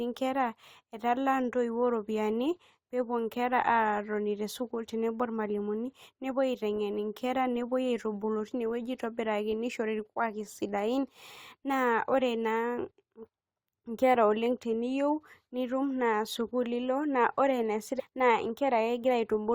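A stream segment skipped at 17.98 to 18.01 s in this speech clip leaves an abrupt forward jump marked by a brief blip. The likely cause is one segment of the segmented stream failing to load, so the player moved straight on to the next segment, dropping that stretch of programme.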